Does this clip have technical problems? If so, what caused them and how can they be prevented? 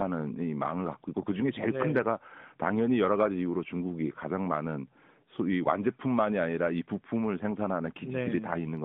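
No technical faults detected.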